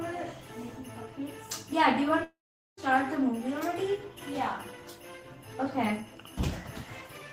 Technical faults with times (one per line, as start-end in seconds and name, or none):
2.23-2.80 long network dropout